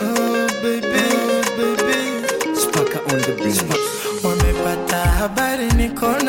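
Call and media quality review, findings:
Doubled audio track, 0.94 s to 3.76 s. Full-band second copy of the same audio, roughly 1 s behind, at about the same level as the original. No decay, no room colouring, so not an echo or reverb tail. Copy cuts in and out abruptly at both ends of the span. Likely cause: a second, slower capture path or an edit holding two out-of-step copies, mixed into the main feed.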